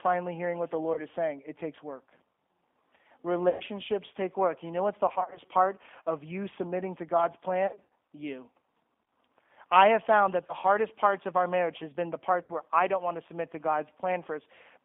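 A speech recording carried over a G.729 codec line. The whole clip is confined to about 250 Hz to 3.5 kHz and has the rough, faintly synthetic texture of 8 kbit/s pulse-based coding. Plain band-limiting would narrow the sound but leave it smooth. VoIP packet loss concealed by the speech codec breaks in at 0.94–0.99, 3.50–3.63 (just before "take work"), 5.08–5.40 (between "know what's the" and "part of you submitting", scattered rather than one gap), 7.67–7.91, 10.47–10.54 (after "I have found that", before "hardest parts of our") and 12.43–12.52 s. These gaps are not silent dropouts. Each is bridged by a stretched, fading buzzy tone or coloured noise, and the voice stays weak for a moment afterwards.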